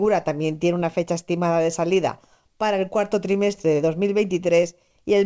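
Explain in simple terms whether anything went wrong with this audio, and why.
Something did go wrong, and it comes from clock drift between sender and receiver. The sending device's audio clock ran slow, by roughly one and a half percent, so sound arrived a little more slowly than the receiving end played it and its buffer kept running short.

To stay in step, the receiver made repeated timing corrections from 0.03 s to 5.20 s, repeating short slices of sound at uneven intervals. Together these add roughly a tenth of a second, so the audio plays at about 98% speed, with a slightly unsteady pace and occasional faint hiccups.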